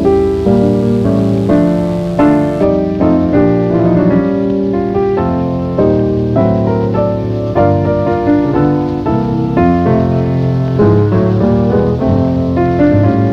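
From 0 to 2.64 s, mains buzz: switching spikes from the 50 Hz supply leak in, leaving a raspy, harmonic-rich buzz roughly 30 dB below the signal.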